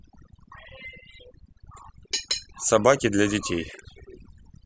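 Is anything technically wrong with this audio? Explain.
Yes. Overdone noise removal affects the whole speech clip. The noise reduction was set too strong, so frequency bands near its noise estimate were pushed far down or muted. Quiet parts of the voice went too. Pauses fall to near silence with twinkling specks.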